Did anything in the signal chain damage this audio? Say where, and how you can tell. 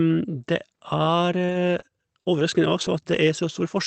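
Yes. At the network and jitter-buffer stage there is a short stall from a late packet at 1.45–1.52 s. A packet arrived late, so the receiver held the last sound for about 34 ms and then resumed from the same point without losing any audio. The waveform shows a few near-identical repeating cycles there, and the spectrogram shows a frozen, horizontally smeared frame. Afterwards everything sits about 34 ms later.

Also at the network stage, there are six instances of a lost packet rebuilt from error correction, each 60 ms long, at 1.49, 1.79, 2.21, 2.39, 2.81 and 3.11 s. The Opus decoder replaced each lost packet with the lower-bitrate copy carried in the next packet, so the speech never drops out but turns grainier. On a spectrogram those patches show blurred harmonics and a raised noise floor between them.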